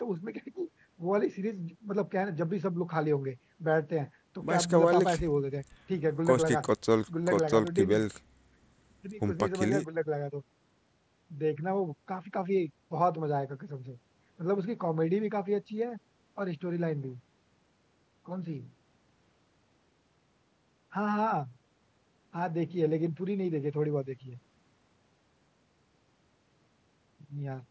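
Nothing stood out on listening to this speech recording.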